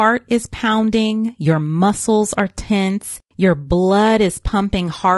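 Throughout this speech clip the voice sounds rough and grainy, with noise between harmonics, likely from low-delay AAC compression (AAC-ELD) at a bitrate consistent with about 32 kbps.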